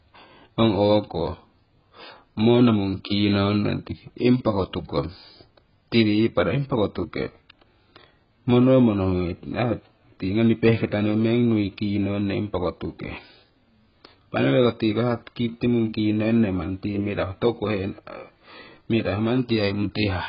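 From start to finish the speech sounds dull and smeared, with a watery, warbling texture on sustained vowels and a fizzy edge on sibilants. Nothing is present above about 5.3 kHz. This is likely AAC compression, with AAC-LC squeezed to a very low data rate, which fits a bitrate around 12 kbps. With so few bits, the encoder drops the top of the spectrum and coarsely quantises what remains, leaving heavy codec damage across the whole recording.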